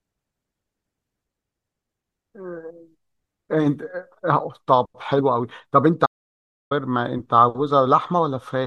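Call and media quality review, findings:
Audio dropout to silence, 6.06–6.71 s: speech cuts out mid-flow for about 0.65 s, silent with no room tone. Likely input loss upstream (link or device drop, or transient mute) while the recorder kept writing silence; content in the gap lost.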